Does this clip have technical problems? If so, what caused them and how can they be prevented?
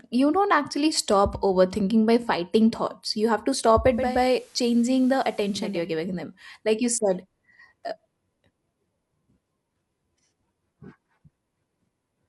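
Yes. From 3.84 to 5.90 s, after "you have to stop" and before "giving them like you", the digital radio is blending to the analogue FM signal: hiss rises, roughly 25 dB below the speech, and the level drops about 4 dB over a 0.37 s cross-fade. The gradual fade and added hiss, rather than muting, distinguish it from a dropout. Recording from a stronger digital signal, or fixing the receiver to digital-only reception, prevents it.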